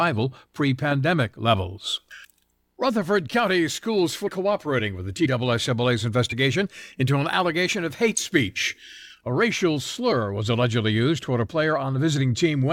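Around 4.27 s, 5.25 to 5.28 s and 6.29 to 6.33 s, compressed frames were skipped: the speech jumps ahead by roughly 70 ms, then about 20 ms twice. At 8.17 s a corrupt frame was decoded, with a couple of damaged frames putting a short burst of energy at the wrong frequencies, peaking at about -10 dBFS.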